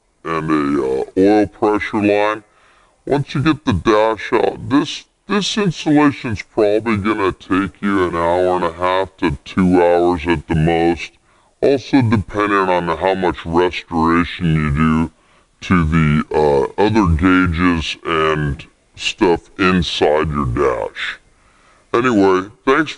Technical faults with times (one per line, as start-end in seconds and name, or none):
0.00-22.97 wrong sample rate